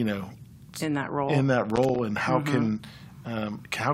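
Right after "that role in that", from about 1.76 to 1.99 s, there's a burst of loose connector crackle: a worn or dirty contact flickering open and shut, chopping the signal into an irregular scratchy rattle, clearing just before "and how".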